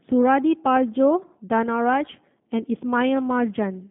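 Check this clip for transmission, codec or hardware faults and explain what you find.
One fault runs through the whole clip: G.729 codec coding. The speech is rebuilt from a vocal-tract filter, pitch predictor and sparse pulses, consistent with 8 kbit/s G.729A. Bandwidth is confined to roughly 150 Hz to 3.5 kHz, and the speech sounds plainly rough and synthetic.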